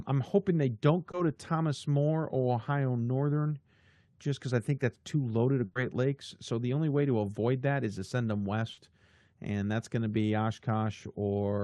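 Right after "I'm hoping they don't", around 1.11 to 1.15 s, there's a short concealed packet loss: about 20 ms of audio never arrived, so the receiver stretched the last sound to cover it and blended back, leaving a quick smear. The same happens after "is to send them" at 8.73 to 8.79 s, with about 40 ms patched, which gives a slightly longer wobble.

In between, just after "that's too loaded of" at 5.65 to 5.77 s, there's a burst of packet loss. Roughly 100 ms went missing in one go, and the concealment held the last sound and let it fade, so you get a brief buzzy or hissy hold before the speech jumps ahead. The stretch that was lost never comes back. All of this rides on a call codec path whose top end stops around 12 kHz.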